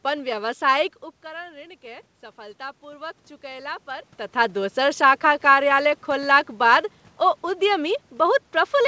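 A speech recording carried over a call path, with nothing above 8 kHz, fitting a G.722 wideband codec, shows automatic gain rising from 1.23 to 4.15 s. Just before, around 1 s, the talker backs off and the voice drops by about 17 dB. The gain control then slowly lifts the level by about 5 dB. Unlike a talker simply moving closer, the room noise swells along with the voice. From 5.02 s to the end, automatic gain falling follows the talker's return near 4 s. The sound starts loud, then voice and background sink together gradually rather than stepping down.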